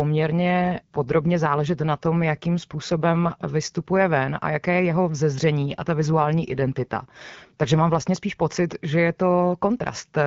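From 0.64 to 3.36 s, and again from 5.68 to 8.09 s, the AMR-WB wideband speech turns rougher and more synthetic, which points to an AMR rate drop, consistent with the codec stepping down from 12.65 to 8.85 kbit/s and spending bits on error protection. Each stretch clears just before "vystupuje ven a jaké" and "spíš pocit že je". Unlike a switch to narrowband or packet loss, the band stays full and the sound never breaks off.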